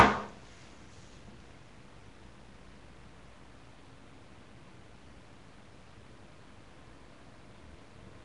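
From start to finish the sound carries a rough, hissy fuzz and a smeared, blurred texture, and nothing comes through above 10.6 kHz. The damage is plainly audible and points to Nellymoser compression, likely the Nellymoser Asao codec used for Flash microphone audio, at a rate that fits roughly 44 kbps. It codes short 256-sample blocks on a tight bit budget, so weaker frequency bands get no bits and are refilled with noise, which produces the grainy haze.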